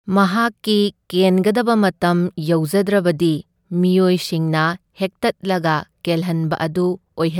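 Listening to this speech recording, nothing stood out as a technical problem at any point.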